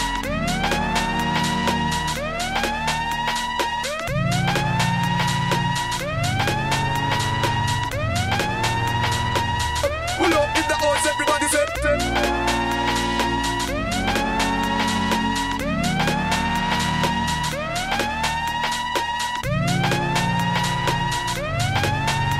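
No technical faults are audible anywhere in the recording.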